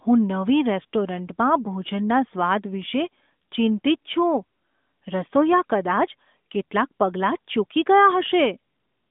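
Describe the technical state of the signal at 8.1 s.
At 8.1 s the audio is intact, with no fault at that moment, only the narrowband band limit of the AMR narrowband mobile codec carrying the speech.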